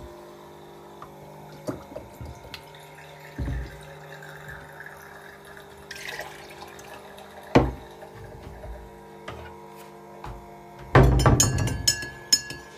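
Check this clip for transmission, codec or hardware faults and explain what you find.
No transmission, codec or hardware faults are audible in this sound clip.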